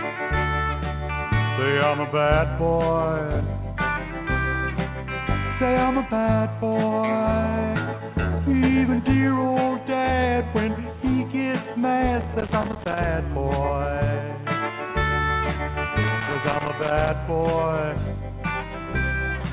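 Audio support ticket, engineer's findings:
Skip ahead at 7.76–7.78 s: playback jumps forward with no gap, dropping about a second of audio and joining both sides almost directly. Likely a jitter buffer overflow discarding queued audio. This is unlike a dropout, which leaves silence or a concealment fill.

Jitter buffer speed-up from 7.86 to 9.06 s: audio runs at 111% speed with pitch unchanged, trimming roughly 150 ms in total. The buffer is removing short pitch-period pieces to shed surplus buffered delay. This is unlike resampling drift, which would shift pitch.

Loose connector crackle at 12.21–13.04 s and 16.04–17.09 s: irregular bursts of scratching. A worn or dirty contact is making and breaking, chopping the signal, with any line DC adding pops. The texture is random and bursty, unlike steady codec noise. This sits on the G.711 mu-law path's 4 kHz band limit.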